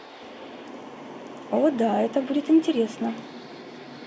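No faults detected in the speech; nothing to flag.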